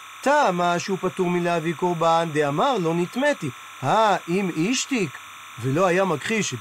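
Timecode bleed runs through the whole speech clip, from start to finish. A linear timecode signal has leaked in from a nearby track or cable. The code switches between two tones near 1 and 2 kHz. Its cadence fits 29.97 fps timecode. It sits about 20 dB below the speech. The result is a constant chirping warble behind the voice. It never stops.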